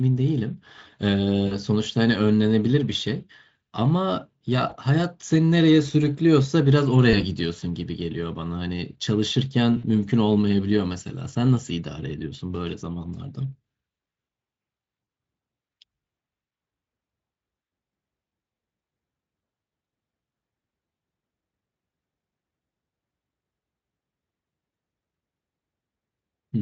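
At 1.47 to 1.57 s, 4.69 to 4.76 s, 7.11 to 7.20 s, 9.77 to 9.85 s and 15.03 to 15.07 s, VoIP packet loss concealed by the speech codec briefly smears the speech into a buzzy, fading hum. The gaps sound like one to three missing 20 ms frames, roughly 20 to 60 ms. In each, the Speex decoder, lightly coloured here at about 28 kbps, repeats its last pitch and filter at falling gain. On a spectrogram this shows as frozen, flat-lined harmonics. The waveform shows a tapering envelope before it recovers.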